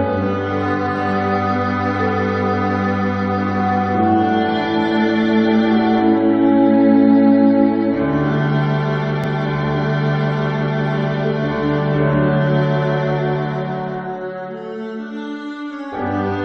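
At 9.24 to 9.26 s there is a Bluetooth stutter. The wireless link lost or delayed audio data, and the receiver filled the gap by replaying its last buffer. About 15 ms of audio went missing, which points to a single dropped frame. Because the gap is short, the repeat is heard as one brief catch or flutter rather than a sustained buzz, and the sound then picks up slightly further on, as though it had kept playing.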